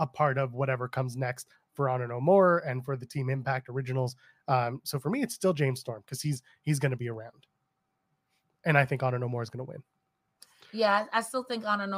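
Nothing in this speech recording stands out as a technical fault: no dropouts, glitches or distortion turn up anywhere along the way.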